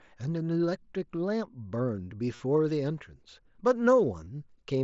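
At 2.35 s, and again at 4.24 s, concealed Bluetooth headset packet loss cuts in. Packets from the headset went missing, and the phone filled each gap by repeating the closest-matching recent stretch of waveform. The first gap lasts 45 ms, the second 22.5 ms, and both sound like a brief buzzy tone held at full level with a slight warble on recovery. A plain dropout would instead leave silence.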